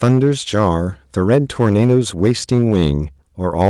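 Hard clipping runs through the whole speech clip: the signal is driven about 7 dB past what one stage can pass, so peaks are sliced flat and a small share of samples hit the ceiling. The waveform shows squared-off tops, and the spectrogram shows harmonic smearing into the high frequencies on loud syllables. It is heard as crackle on the louder moments.

From 2.56 to 2.60 s there is a short stall from a late packet. The jitter buffer ran dry, and the receiver held the last sound for 16 ms until the packet arrived, then resumed with nothing lost. On a spectrogram this appears as a brief frozen, horizontally stretched stripe, and it is heard as a slight hitch or buzz.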